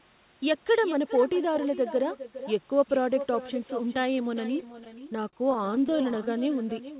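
Echo with no canceller runs through the whole clip. The far end plays the call over a loudspeaker. Its microphone picks that sound back up, and nothing removes it. So every phrase returns around 0.4 seconds later, about 13 dB quieter. The copy sounds thinner than the original. It trails each phrase like a faint shadow. The band stops at 4 kHz, which fits a G.711 call path, so the echo sounds narrow too.

Repeated stalls (stutter) start at 4.56 s and last until 6.41 s. Packets arrived late, and the jitter buffer kept running dry. There are many short gaps, none longer than 39 ms. Each time, the receiver stretched the last sound until new audio came. Together these fills add up to 315 ms, about 18% of that stretch. Nothing is lost. But the sound drags and stutters in quick jerks.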